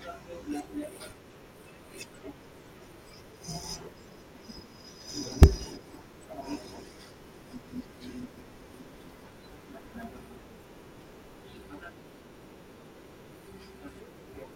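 Periodic USB or driver dropouts run from 0.14 s to 14.44 s, recurring every 0.1 s, ten times a second. At each interval something stalls the USB bus or audio driver, and a couple of milliseconds of speech is lost and filled with silence. The result is a steady train of well over a hundred small ticks, evenly spaced, heard whenever the talker is sounding and fading into the pauses.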